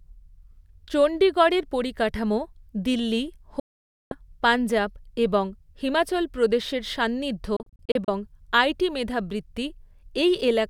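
A digital broadcast dropout hits twice, where the receiver stopped getting usable frames and muted until clean ones returned. From 3.60 to 4.12 s, after "চণ্ডীগড়ের পরিকাঠামো দিল্লি", the sound fades out within about 3 ms and stays silent for 512 ms, consistent with a run of 32 ms frames lost. Speech resumes at "পঞ্জাব এবং হিমাচল প্রদেশের". From 7.56 to 8.08 s, after "এবং হিমাচল প্রদেশের সান্নিধ্য", 224 ms are lost as scattered holes no longer than 32 ms, giving a stuttering, chopped sound.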